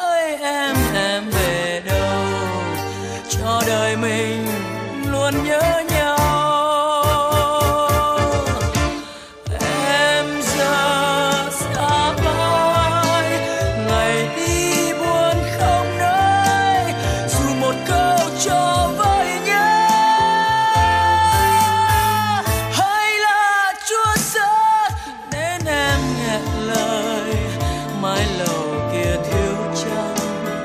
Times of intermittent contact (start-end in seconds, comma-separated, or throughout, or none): none